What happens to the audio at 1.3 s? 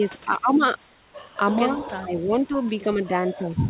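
From 1.28 to 1.36 s the real background is replaced by a smooth hiss about 2 dB quieter. This is comfort noise in place of the background, likely from the sender pausing transmission and the receiver synthesising filler. A spectrogram shows a textureless band, and the waveform shows a lower, uniform floor.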